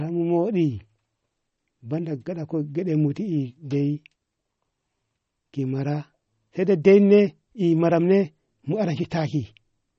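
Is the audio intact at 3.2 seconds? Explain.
No. At 3.2 seconds the speech carries MP3 compression damage, present across the whole clip rather than at that moment alone. The encoder ran short of bits, so it removed everything above about 8.2 kHz and zeroed weak frequency lines that flicker between frames. The result is dull, band-limited audio with a watery, swirling texture and smeared attacks, plainly audible and likely from a low bitrate near 32 kbps.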